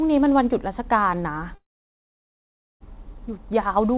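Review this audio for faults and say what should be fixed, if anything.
From 1.55 s to 2.83 s the sound breaks off, likely a long network dropout. About 1.26 s of audio never arrived. The receiver stretches the last sound into a brief fading buzz, then near-silence. The waveform shows a flat gap, and the spectrogram a short smeared tail, then an empty band until the sound resumes with the missing part skipped. A more stable network link, or redundancy such as forward error correction, would prevent this.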